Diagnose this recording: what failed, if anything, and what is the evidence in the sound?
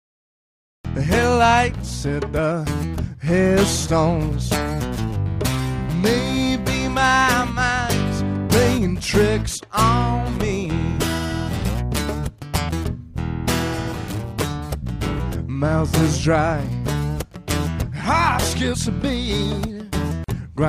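The recording kicked off late, so you get a cut-off start: dead digital silence up to 0.85 s, then the sound jumps in mid-stride with no attack or fade. That points at the capture or recording stage starting after the source was already going.

Near the end there's a gap at a join of encoded pieces. At 20.24 s a hole of about 43 ms opens in continuous sound, edges smeared, before it picks up where it stopped. That's a codec-stage splice where the encoder delay and last-frame padding weren't trimmed.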